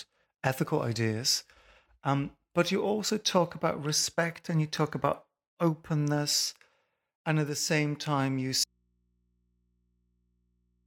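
Speech that breaks off abruptly at 8.64 s, right after "the same time you", and never returns; the remaining stretch to the end holds only a low mains hum, roughly 45 dB below the speech. This audio dropout to a faint residue most likely reflects the signal being lost while the downstream input stayed live and picked up hum.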